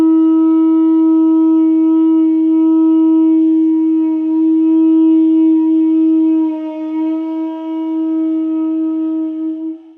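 No technical faults are audible.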